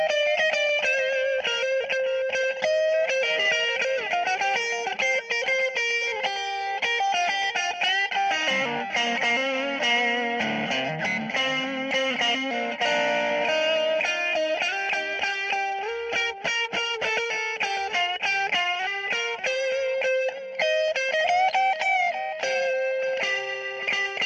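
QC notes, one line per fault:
No faults were found in this recording of sounds. Nothing needs to be logged for this clip.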